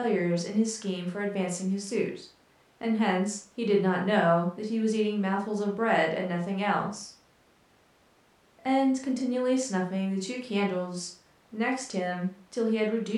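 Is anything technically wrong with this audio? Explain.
No, nothing is technically wrong with this audio.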